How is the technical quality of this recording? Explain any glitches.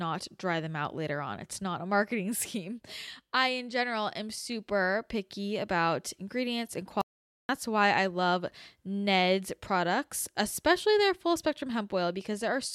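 The recording has one glitch. Audio dropout to silence, 7.02 to 7.49 s: the speech cuts out mid-flow into about 0.48 s of silence with no room tone, likely from a momentary input loss while recording continued.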